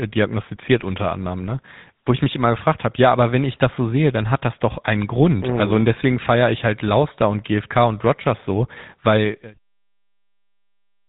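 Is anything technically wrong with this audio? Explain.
Yes. The whole clip carries GSM full-rate codec damage, and it is plainly audible. The codec models the vocal tract as a filter and drives it with a coarse, regularly spaced pulse excitation that keeps only a fraction of the detail. Voiced sounds therefore come out buzzy and gravelly. The bandwidth is cut hard, with nothing above 3.8 kHz, which fits a 13 kbps full-rate stream. The smooth fade-out, starting around 9 s and finishing at 9.59 s, passes through the same coded, band-limited sound.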